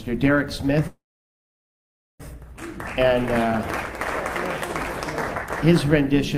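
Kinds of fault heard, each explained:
Call audio freeze: At 0.87 s the sound stops moving forward and stalls until 2.22 s, about 1.32 s in all. A short buzzy or hissy carry-over of the last sound fades out first. Most of the stall, about 1.21 s, is silence. The audio then resumes exactly where it halted. Nothing is skipped, so everything after arrives 1.32 s late. This is likely from held-up packets leaving the jitter buffer empty.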